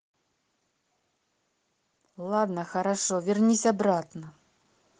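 From 2.16 s to 4.13 s, automatic gain rising occurs: the gain control judges the incoming speech too quiet and steadily turns its gain up by about 5 dB, so the voice and the background swell together across those two seconds, heard through an Opus-style call path limited to about 12 kHz.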